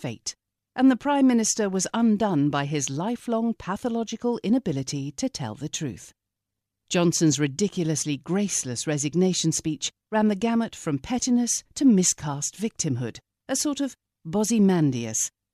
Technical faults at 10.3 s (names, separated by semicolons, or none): none